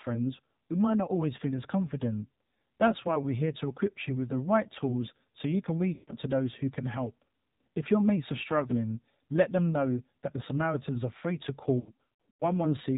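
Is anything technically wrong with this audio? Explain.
Yes. Throughout, the speech passes through the AMR narrowband mobile codec at 7.4 kbps. It samples at 8 kHz and rebuilds the voice from a vocal tract model and a few pulses. Nothing above 4 kHz survives, and the low bitrate leaves a plainly audible buzzy, synthetic quality.

Lost AMR speech frames occur twice. The first is from 5.94 to 6.13 s, between "tools so you can" and "to those who can", with about 140 ms lost. The second is from 11.80 to 12.45 s, after "are free to", with 420 ms lost scattered across 600 ms in runs of up to 100 ms. Frames failed their checksum, so the decoder kept repeating the last good pitch and vocal tract settings at falling gain. The sound is drawn out and fades during each gap, then returns weak or rough for a moment.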